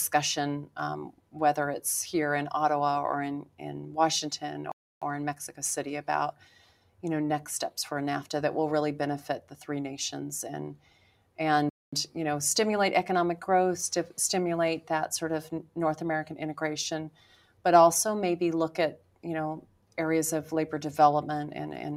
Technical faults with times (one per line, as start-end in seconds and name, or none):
0.00-21.96 noise suppressor applied to music or sounds
1.10-1.36 sound cut by the noise suppressor
3.43-3.61 sound cut by the noise suppressor
4.72-5.02 playback stall
6.32-7.03 sound cut by the noise suppressor
9.41-9.56 sound cut by the noise suppressor
10.75-11.38 sound cut by the noise suppressor
11.69-11.93 playback stall
17.10-17.65 sound cut by the noise suppressor
18.97-19.24 sound cut by the noise suppressor
19.61-19.97 sound cut by the noise suppressor